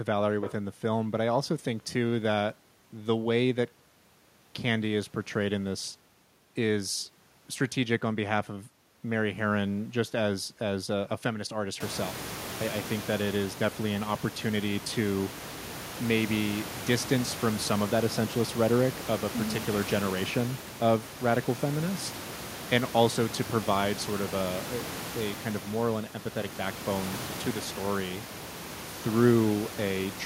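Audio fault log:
Nothing's wrong with this one; the only thing you'll notice is the room's own background noise jumping up by about 24 dB around 12 s, after which it sits about 13 dB under the speech, and that's just the room, not the system.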